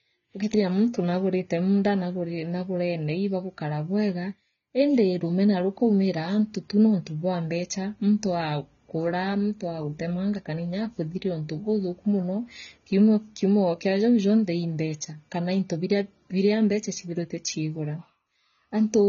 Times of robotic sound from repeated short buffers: none

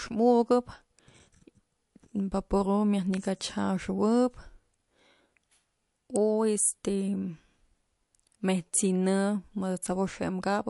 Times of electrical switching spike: 3.14, 6.16

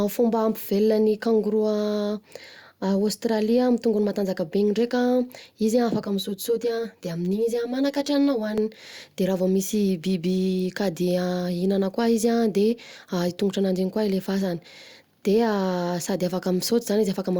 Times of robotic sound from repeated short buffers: none

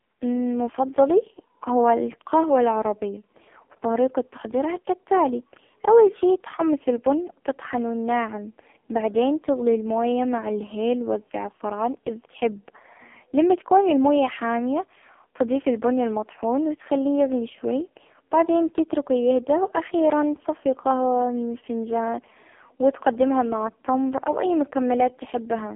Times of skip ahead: none

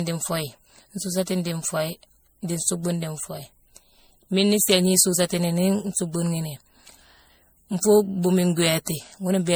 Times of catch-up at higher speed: none

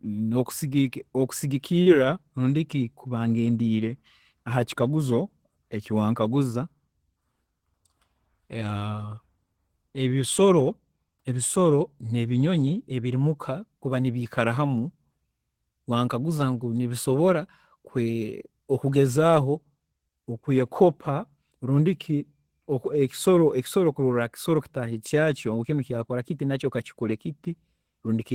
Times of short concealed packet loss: 1.82-1.89

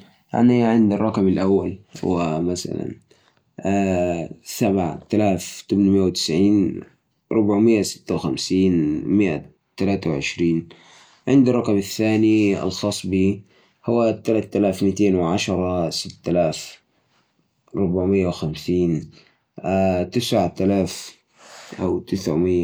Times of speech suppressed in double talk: none

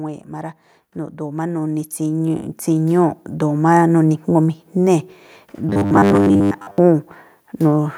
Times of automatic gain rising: 0.29-3.87

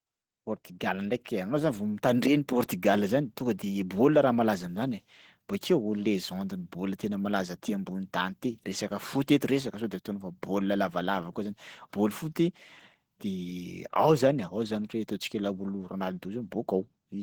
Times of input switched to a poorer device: none

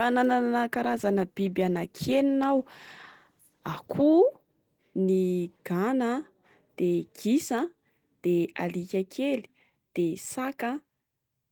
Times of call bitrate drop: 0.74-4.15

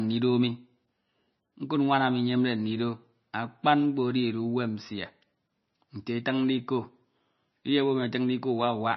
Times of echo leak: none

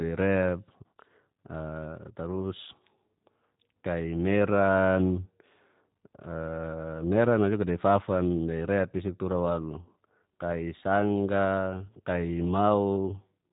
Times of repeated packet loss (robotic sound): none

